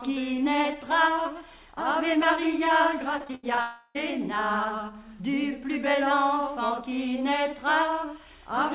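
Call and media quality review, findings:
Choppy, robotic patch from 3.18 to 3.59 s: repeated packet loss. Several short holes, longest 81 ms, about 40% of that stretch filled by repeating the last bit of sound, so it goes stuttery with chunks missing.

Right after, 3.61 to 3.97 s, a long network dropout is likely the cause. Roughly a third of a second of audio never arrives. Concealment stretches the last sound into a smeared buzz the whole way, with no silence, then the audio picks back up without that chunk. The band stops at 4 kHz throughout, which fits a narrowband G.711 mu-law call path.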